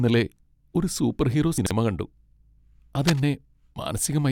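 At 1.58 s, just after "ഒരു സൂപ്പർഹീറോ", the speech jumbles until 1.71 s. These are chunks out of order. The audio moves in blocks of about 43 ms. One block was delayed, and the sound points to it landing two blocks late. So it plays after the blocks that should follow it. No audio is missing. The sequence is simply scrambled. Three hard joins result, and the sounds briefly tumble over one another.

From 3.01 s to 3.20 s, a burst of scratching and rustling sits over the speech. This is cable scratch noise. The bursts are dense and uneven. They are only a little quieter than the speech. The likely cause is a worn cable, connector or control being moved. Its contact resistance then jumps around rapidly, and that adds the crackling noise for about a fifth of a second.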